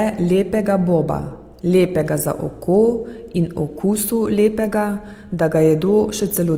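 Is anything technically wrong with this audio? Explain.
Yes. Throughout the speech, tones sound rough, grainy and noisy while the bandwidth stays full. This is likely Opus compression in CELT mode, filling starved bands with folded spectrum or noise, which fits a rate near 24 kbps.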